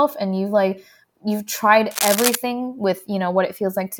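A worn connector likely moved, causing cable scratch noise from 1.91 to 2.35 s, after "you've like you've tried": uneven scratching roughly as loud as the speech.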